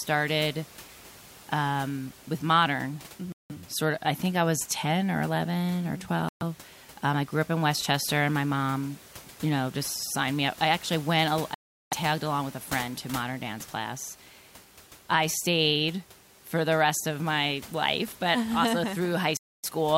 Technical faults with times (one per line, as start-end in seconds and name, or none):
3.32-3.51 Bluetooth stall
6.29-6.42 Bluetooth stall
11.54-11.93 Bluetooth stall
19.37-19.65 Bluetooth stall